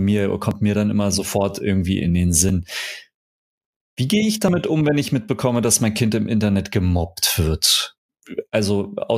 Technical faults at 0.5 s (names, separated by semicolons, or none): overlap between stream segments